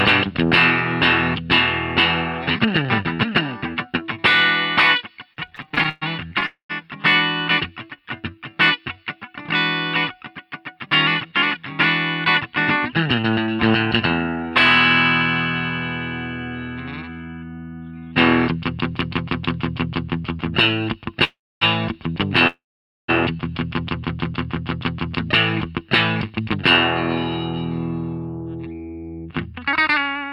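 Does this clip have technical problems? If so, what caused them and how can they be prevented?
Yes. Repeated stalls (stutter) run from 5.33 to 6.46 s: sixteen short gaps, the longest 122 ms, filled with continued sound totalling 306 ms, about 27% of that stretch. Packets kept arriving behind the playout rate, so the jitter buffer kept draining and the receiver kept stretching the last sound. A steadier network path, with less queuing on the link, would prevent this.

Call audio freezes occur at 6.46 to 6.71 s, 21.24 to 21.63 s and 22.47 to 23.10 s. Each is a buzz or hiss that fades into silence (120, 260 and 490 ms), adding 233, 373 and 611 ms of delay. The likely cause is packets held up in transit until the buffer emptied, after which playback resumes where it stopped. Prioritising call traffic, for example with QoS, would prevent this.

Jitter buffer slow-down from 7.90 to 9.05 s plays the audio at 86% speed at unchanged pitch. 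The receiver repeated single pitch periods and pause fragments, adding 170 ms to rebuild its reserve, so sounds are drawn out. A larger starting buffer target would prevent this.

Jitter buffer speed-up runs from 10.86 to 17.96 s at 104% and from 26.28 to 30.25 s at 106%, pitch unchanged. Holding more audio than it aimed for, the receiver trimmed short pitch-period pieces to cut excess delay, removing around 0.3 s in the first stretch and a fifth of a second in the second. Smoother delivery, so that packets do not arrive in bursts, would prevent this.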